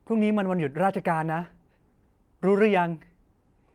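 Nothing in the speech here counts as a fault, since it simply carries the ordinary character of a WebRTC call path, with the Opus codec's usual coding texture and a top end that stops around 12 kHz.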